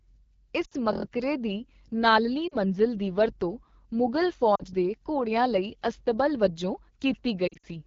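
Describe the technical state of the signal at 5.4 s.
At 5.4 s the AMR wideband (HD Voice) codec, present throughout, makes the speech rough and raspy, fitting a low rate near 8.85 kbit/s. Unlike narrowband coding, the band still reaches 7 kHz, with noisy synthetic highs above 6.4 kHz.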